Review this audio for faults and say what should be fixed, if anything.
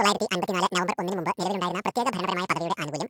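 Audio read two samples at a time (double speed) affects the whole speech clip. It plays twice as fast and a full octave high. Set the reader's channel count and sample width to match the file.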